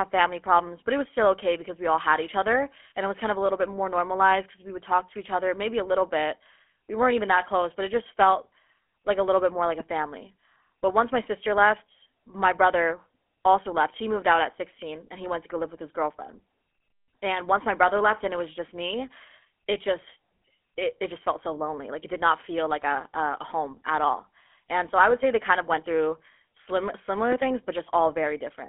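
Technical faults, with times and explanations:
Throughout, GSM full-rate codec: the speech was coded at 13 kbps by a GSM full-rate coder, which models the vocal tract and drives it with sparse regular pulses, on a line passing roughly 250 Hz to 3.5 kHz. This gives a plainly audible buzzy, gravelly roughness and a thin tone.
2.90–2.92 s, lost GSM frames: just after "all had each other", a single 20 ms frame went missing. The decoder filled the gap by repeating the last good frame's settings, so the sound briefly hangs with a rough, metallic ring before resuming.
27.32–27.35 s, loud pop: just after "of went through slim", a single sharp pop about 10 dB above the speech lands on top of the sound, which carries on underneath. The cause is likely a sudden voltage step or pulse, from a plug, switch or static, shaped briefly by the circuits after it.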